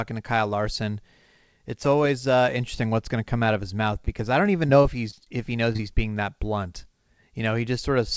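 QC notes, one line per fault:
4.05–4.09 s, short stall from a late packet: Between "out of his mouth" and "I don't even" a packet arrived behind schedule and the jitter buffer drained. The receiver held the last sound for about 22 ms until the packet turned up, then resumed from the same point. No audio is lost, but that moment is stretched with a faint buzzy sustain, and everything after it runs about 22 ms later.
4.67–5.28 s, repeated packet loss (robotic sound): After "I don't even" and before "if he knows", the stream broke up four times in quick succession. About 60 ms of audio never arrived, and each hole was patched by continuing the previous sound. The longest patch was about 22 ms, and about 12% of the span is concealed. The repeated synthetic patches give this stretch a choppy, robotic texture with small pieces missing.
5.72–5.81 s, short concealed packet loss (two back-to-back): Just after "if he knows", two consecutive chunks of about 20 ms each failed to reach the decoder in time. 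Each was filled by extending the preceding sound, voiced or noise-like, and then blended into the real signal. Heard together, they form a brief smear or wobble of under a tenth of a second, in audio that is band-limited to 8 kHz by the wideband call codec.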